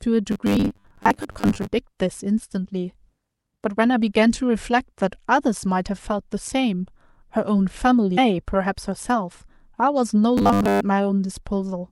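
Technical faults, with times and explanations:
0.32–1.73 s and 10.38–10.81 s, robotic sound from repeated short buffers: the audio turns into a stiff metallic buzz at 100 Hz while roughly tracking the speech, likely because audio arrived too late and the last 10 ms chunk was replayed in its place. About half the sound is skipped in the first stretch and most of it in the second.
8.14–8.18 s, damaged data in a compressed stream: a brief glitch where corrupted bytes in the encoded audio made the decoder misread its frames and lose sync, producing garbled output until it locked onto the next valid frame header.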